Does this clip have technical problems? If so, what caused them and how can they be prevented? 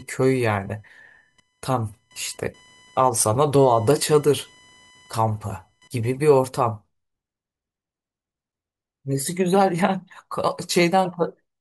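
Yes. Computer activity noise runs from the start to 6.11 s: a thin buzzing, chirping layer at around a kilohertz, sitting roughly 35 dB below the speech, that shifts with the computer's workload rather than with the talking. Processor, graphics or mouse load changes disturb the ground the audio circuit shares with the machine, and that disturbance rides into the recording. To prevent it, use an external USB or isolated audio interface, or a ground-loop isolator.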